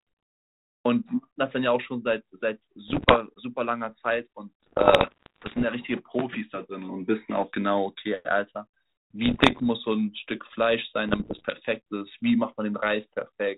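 Bit errors on an ADPCM link strike at 2.88–3.18 s, 4.63–5.64 s, 9.24–9.66 s and 11.08–11.57 s, the first being densest. Flipped bits knock the decoder's step size and predictor astray, so each error rings on briefly as pops, rough bursts and sudden level jumps.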